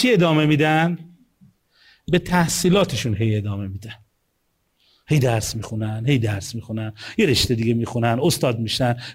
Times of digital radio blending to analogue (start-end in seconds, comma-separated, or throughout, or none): none